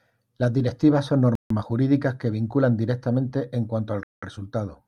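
Speech with two likely Bluetooth stalls: delayed wireless packets emptied the headphones' buffer, dropping the sound to silence after "directivas son" (1.35–1.50 s) and after "que vinculan directamente en" (4.03–4.23 s).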